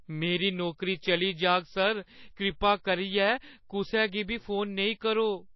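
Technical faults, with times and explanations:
Throughout, MP3 compression: the speech has nothing above about 5.8 kHz and carries plainly audible codec damage, with a watery, swirling quality and smeared consonant onsets. This points to MP3 encoding at a low bitrate, likely around 24 kbps, where the encoder cuts the treble at a fixed frequency and drops weak spectral lines that flicker on and off between frames. A spectrogram would show a hard ceiling near 5.8 kHz and patchy, blocky holes below it.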